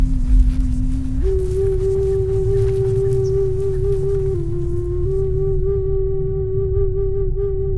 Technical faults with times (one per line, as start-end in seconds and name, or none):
none